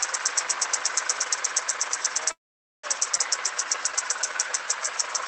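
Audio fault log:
2.31 to 2.85 s, call audio freeze: The sound stops and the last bit of it is carried on briefly before dropping to silence for about half a second. Then the audio resumes where it left off. Nothing is lost. A gap of roughly 0.52 s has simply been inserted. This is likely packets held up in transit, leaving the jitter buffer empty until they arrived.
3.17 to 3.20 s, skip ahead: Playback jumps forward almost at once, with only a tiny join. Roughly a fifth of a second of audio is missing. The material before and after the jump sits nearly back to back. Later audio was already waiting, so a stretch was dropped to catch up, taking back part of the delay added by the freeze.
3.37 to 4.87 s, jitter buffer slow-down: Over this stretch the sound runs at about 87 percent speed while keeping its pitch. Sounds are drawn out, with a faint warble in places. The buffer was rebuilding its reserve. 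It repeated single pitch periods and small pieces of quiet, many in a row. In total about 206 ms was added.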